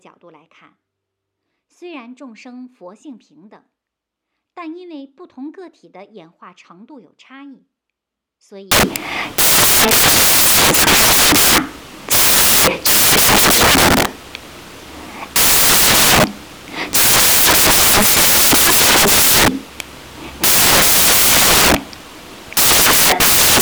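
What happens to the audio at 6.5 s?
Nothing goes wrong at 6.5 s: the audio plays through that moment intact, with no dropout, click, distortion or other fault to be heard.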